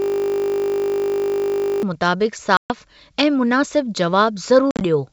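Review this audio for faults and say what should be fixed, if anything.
System hang loop, 0.00 to 1.83 s, already under way when the clip begins: the driver stalled while the hardware kept replaying one 20 ms stretch of its ring buffer, about 90 times over. A segment that short repeats 50 times per second, so instead of a stutter it becomes a steady 50 Hz buzz. Running audio callbacks at real-time priority, with a watchdog that mutes output when the buffer stops being refilled, would prevent it.

Packet loss on an ADPCM call, 2.57 to 2.73 s and 4.71 to 4.83 s: the first gap drops about 130 ms of speech as one solid hole. The second loses 80 ms scattered across 100 ms, with its longest run at 50 ms. Silence fills each hole, and the receiving decoder's predictor and step size drift away from the sender's. When the speech resumes it comes back slightly distorted, then recovers over the next few tens of milliseconds. 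Packet-loss concealment that also resets or resynchronises the ADPCM state would prevent it.

The G.722 wideband coding underneath is clear and at most faintly marked.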